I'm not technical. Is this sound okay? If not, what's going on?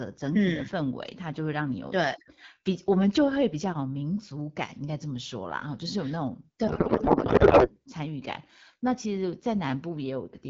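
No. From about 6.67 to 7.69 seconds, the speech turns into garbled noise and a wobbly warble that barely follows what was being said. This is a codec payload misread. The phone system squeezes speech into small packets of data. Here the receiving end expected the bits packed one way, but they were packed another way. So it read every piece from the wrong place, and the sound came out scrambled for about a second.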